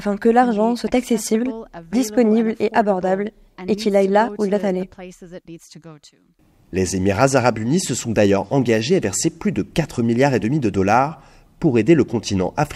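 Nothing in the audio stood out as a technical fault on listening.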